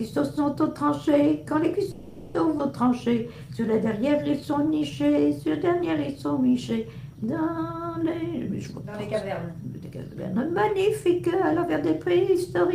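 A call audio freeze runs from 1.91 to 2.36 s: the sound stalls and the last fragment is stretched into a fading fill for about 430 ms, after which playback resumes exactly where it stopped, with nothing lost. The likely cause is delayed packets draining the jitter buffer. A skip ahead follows at 2.58 to 2.61 s, where roughly a fifth of a second of audio is dropped and the two sides are spliced almost directly, with only a tiny bridging gap. From 2.86 to 5.22 s comes a jitter buffer slow-down: pitch periods and pause fragments are repeated over and over to rebuild the reserve, adding 217 ms, so the audio plays at 91% speed with unchanged pitch and drawn-out sounds. Between 8.03 and 11.77 s there is a jitter buffer speed-up: short pitch-period pieces are repeatedly cut to trim excess delay, removing around 0.4 s, so the audio runs at 112% speed with the same pitch and a hurried feel.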